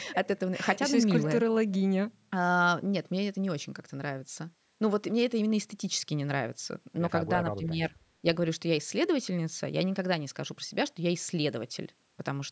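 From 7.52 to 7.95 s the speech dips by about 15 dB in patches. Likely speech suppressed in double talk: the echo canceller ducked the talker.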